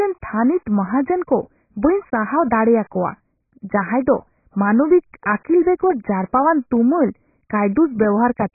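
From start to end the speech is dull and band-limited, with nothing above 2.5 kHz, plus a warbling, smeared texture on vowels and sibilants, likely from heavy AAC compression at a very low bitrate near 12 kbps. A plain low-pass filter would cut the top cleanly, without that swirling.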